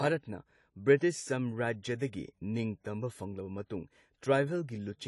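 From start to finish the speech carries plainly audible AAC compression damage, likely from coding at a low bitrate near 32 kbps. Nothing sounds above 11.5 kHz, and sibilants turn fizzy and warbling. Unlike a clean low-pass filter, the remaining band itself sounds smeared and patchy.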